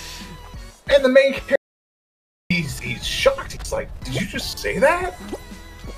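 At 1.56 s the sound cuts off abruptly into silence, an audio dropout to silence lasting about 0.95 s until 2.50 s. Unlike a noise gate or fade, no room tone or ramp remains; likely the input was lost while recording continued writing zeros.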